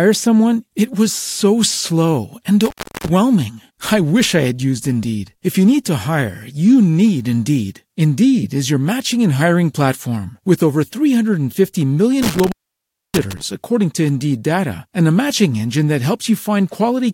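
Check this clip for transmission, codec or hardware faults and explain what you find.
Two dropouts of the same hardware fault occur in the speech.

Intermittent contact at 2.65–3.10 s and 12.22–13.41 s, the second ending just before "according to". A loose cable or plug briefly breaks the signal path, for about 0.35 s and 0.62 s. The sound drops to faint hiss, with crackle as the contact opens and closes.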